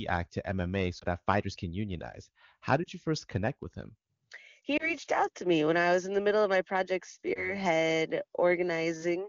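Lost AMR speech frames at 0.99–1.04, 2.83–2.88, 4.77–4.96 and 7.33–7.57 s: the decoder repeats its last good settings at falling gain, causing brief dips or warbles, seen as waveform notches and smeared spectrogram harmonics.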